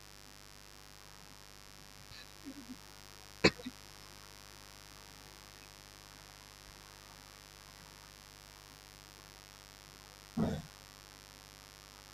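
From the first second to the end of the speech, a mains buzz sits underneath everything, about 10 dB below the talker. It comes from sharp switching spikes, such as those from a dimmer, a rectifier or a missing shield, arriving twice per 50 Hz cycle, which builds a dense stack of harmonics reaching several kHz. That spread of upper harmonics is what separates it from a plain hum: the sound is raspy and edged rather than a smooth, low drone.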